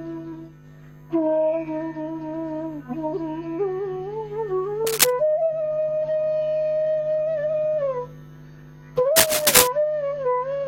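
Cable scratch noise appears from 4.87 to 5.10 s and again from 9.16 to 9.67 s: dense, irregular bursts of crackling and rustling that sit a few decibels above the sound itself. The second burst lasts about twice as long. The likely cause is a worn cable, connector or control being moved, so its contact resistance jumps about rapidly and injects ragged noise into the signal path.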